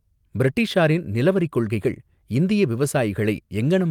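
Listening to the speech here, nothing stood out as a technical fault at any point.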